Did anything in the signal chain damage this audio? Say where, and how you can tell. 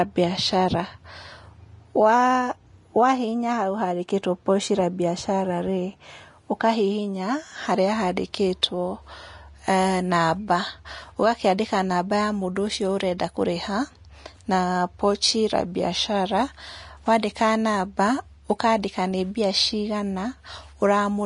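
Yes, at the codec stage. Throughout the speech there is nothing above 10.6 kHz, and the remaining treble is hissy and grainy, with plainly audible damage. That pattern likely comes from Vorbis compression at a low bitrate, and the sound fits roughly 33 kbps. The encoder draws a smooth spectral floor and quantises the residue above it so coarsely that fine high-frequency detail becomes noise of similar energy. The cut-off is lowered to save bits.

Pre-echo appears at 8.62 s and again at 17.22 s. Each time, a short hiss of about 10 to 11 ms sits just before a sharp onset, and the attack itself sounds softened. The transform codec spreads quantisation noise across an entire block. When a transient lands late in that block, the noise sized for the loud part also fills the quiet stretch ahead of it, so the hiss becomes audible before the attack.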